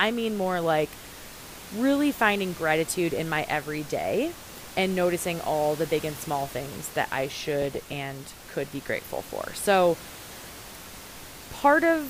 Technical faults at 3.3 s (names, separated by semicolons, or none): DAB burbling